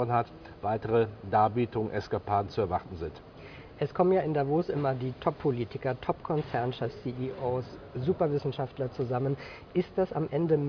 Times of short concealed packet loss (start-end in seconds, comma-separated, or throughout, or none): none